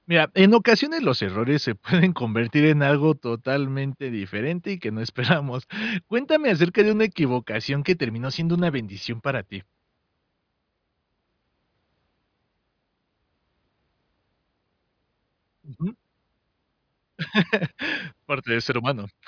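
No audible technical faults turn up anywhere in this recording of speech.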